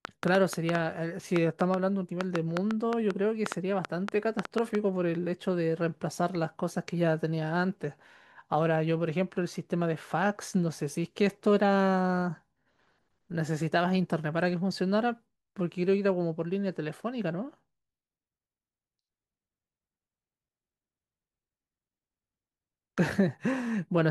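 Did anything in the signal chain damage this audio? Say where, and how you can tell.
Yes: a train of clicks from 0.05 to 4.76 s, about 20 similar, unevenly spaced pulses at 4.9 per second, about 15 dB above the speech. They add to the sound rather than cut it, likely from interference in the analogue wiring.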